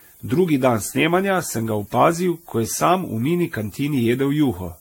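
From the first moment to the end, the speech carries low bit depth with noise shaping. The signal is quantised to what sounds like about 9 bits, and the rounding error has been pushed upward in frequency rather than left flat. The result is a constant thin hiss sitting roughly 25 dB below the speech, weighted heavily toward the top of the band.

Running alongside it for the whole clip is a smeared, swirly, hollow quality that is worse than a single lossy encode would explain, which is likely generation loss. The audio appears to have been decoded and re-encoded around four times, with each pass quantising again on a shifted frame grid so the noise and spectral gaps pile up. Attacks lose their edges, and nothing survives above 16.6 kHz, which fits an AAC-LC chain at 64 kbit/s.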